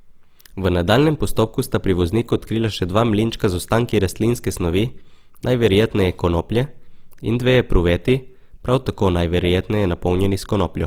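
From start to finish the speech carries Opus compression damage that is plainly audible: tonal parts turn rough and grainy, with a noisy sheen over the upper range. Bands starved of bits have been filled by folding lower ones or with noise, which suggests a low rate of around 24 kbps, most likely in the music-oriented mode. A spectrogram would show full bandwidth with few holes, but smeared, speckled high bands in place of clean harmonics.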